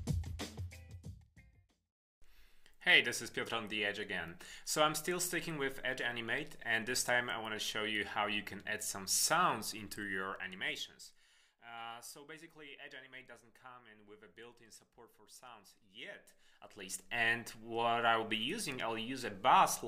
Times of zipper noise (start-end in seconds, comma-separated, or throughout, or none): 15.99-17.22